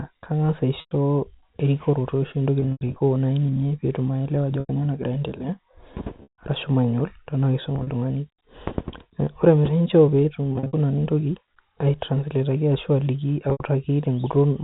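Speech over a narrowband telephone path with packet loss with pitch repetition at 0.8, 2.6, 4.6, 6.23, 7.76, 10.53 and 13.5 s: lost audio is bridged by repeating the last pitch period, giving held, buzzy fills that fade into silence on the longer losses.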